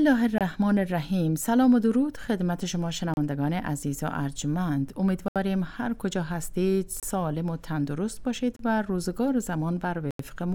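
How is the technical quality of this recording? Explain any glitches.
The recording is marred by six brief dropouts where the sound cuts out completely and then resumes. These are Bluetooth stalls, at 0.38–0.41 s, 3.14–3.17 s, 5.28–5.36 s, 7.00–7.03 s, 8.56–8.59 s and 10.11–10.19 s. The likely cause is radio interference delaying packets until the receiver's buffer emptied, so playback halted until retransmissions arrived. Each gap is pure silence lasting 25 to 86 ms, with the longest at 5.28 s and 10.11 s, heard as abrupt stutters.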